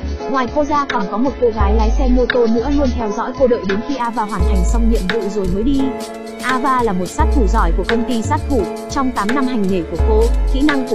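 For the first 4.0 s the audio plays from an adaptive stream starting at a low bitrate. Nothing is present above 6.5 kHz, and coding artefacts are stronger. That band limit and roughness fit a lean AAC encode in the region of 16 kbit/s. At 4.0 s the player has measured the connection and switches to a richer rendition, consistent with something near 96 kbit/s. Treble returns abruptly, with no gap in playback.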